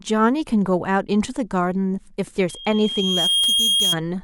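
At 2.49 s a thin tone at 3.2 kHz creeps in under the speech and swells over about a second to sit somewhat above it, ending at 3.97 s. This is loudspeaker feedback squeal: the microphone hears its own loudspeaker, and at that frequency the loop keeps amplifying itself.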